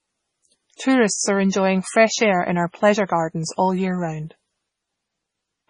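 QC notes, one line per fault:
Throughout, MP3 compression, likely: the speech has nothing above 10.5 kHz, a hard treble ceiling where the encoder dropped the top band to save bits. The damage is heavy. Weak frequency lines flicker in and out between frames, giving a watery, swirling texture with metallic chirps on s sounds, and consonant onsets are smeared. That degree of starvation points to a very low bitrate, around 24 kbps.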